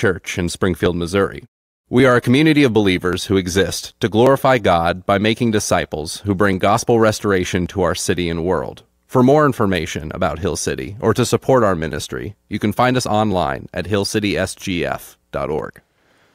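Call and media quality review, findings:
Regular clicks in the speech every 1.13 s, from 0.86 s to 15.59 s, about fifteen in all. Likely clock drift buffer slips between two independently clocked devices: a mismatch on the order of 0.1% fills or drains the buffer until a few dozen samples are dropped or repeated, producing each click.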